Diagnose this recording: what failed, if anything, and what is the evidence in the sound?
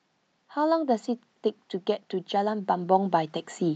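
Automatic gain rising, from 2.3 s to the end of the speech. The failure sits in the call processing stage: the gain control judged the input too quiet and began lifting its gain, so the voice and the background noise swell together over the last second and a half rather than the voice alone getting louder. The slow, shared rise is the evidence. The band limit near 8 kHz fits a wideband call codec such as Opus.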